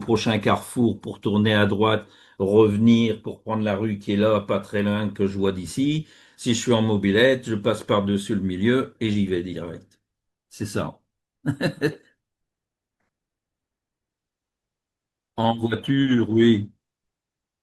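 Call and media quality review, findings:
Adaptive stream at a lower bitrate, 14.09 s to end (17.63 s). Speech quality abruptly drops, codec artefacts rise, no gap. Player switched to a lower-bitrate rendition after throughput fell, which fits an Opus step from 64 to 16 kbit/s.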